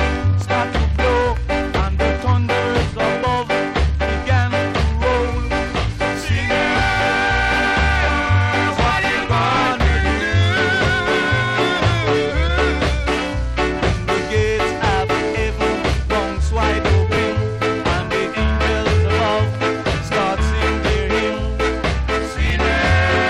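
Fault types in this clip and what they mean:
Chunks out of order: at 17.14 to 17.17 s and 22.47 to 22.50 s, a 10 ms block plays two blocks late, giving a brief jumbled flicker. The waveform shows three abrupt discontinuities within 30 ms, and the spectrogram shows thin vertical broadband streaks.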